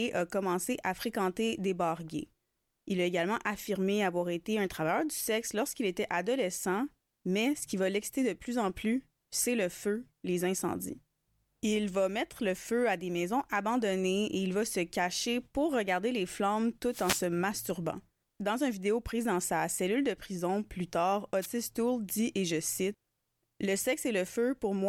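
Two wireless microphone noise hits in this speech: after "pour regarder les flammes" at 16.90–17.25 s, then a short one after "de prison plus tard" at 21.41–21.46 s. Each is a swish of static as the FM signal fades.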